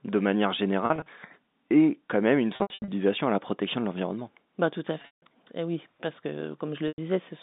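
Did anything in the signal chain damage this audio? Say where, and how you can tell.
Yes. The network dropped packets, and the receiver covered each gap with packet loss with pitch repetition, at 0.86–1.06 s, 2.56–2.88 s, 5.02–5.22 s and 6.88–6.98 s. Short dropouts sound like a briefly held, buzzy tone. The 160 ms run starting near 5.0 s fades toward silence before the sound returns.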